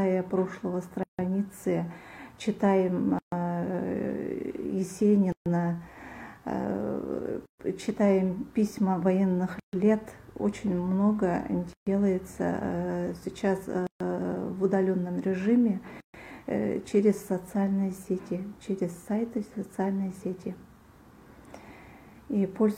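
The sound drops out briefly, then resumes where it stopped. This is a gap at a join of encoded pieces. Silences open at 1.03, 3.19, 5.32, 7.46, 9.60, 11.73, 13.87 and 16.00 s. The first lasts about 154 ms and the rest about 136 ms each. They arrive after every 2 s of sound. So the audio was encoded in 2 s pieces and joined untrimmed. Each piece's encoder delay and final-frame padding stayed in as silence.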